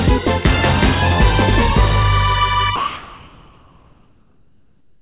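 From 2.76 s to the end, the sender likely stopped transmitting and the receiver filled the gap with comfort noise in place of the background. The real background, about 36 dB below the loudest sound, becomes steady, featureless hiss, about 4 dB different in level.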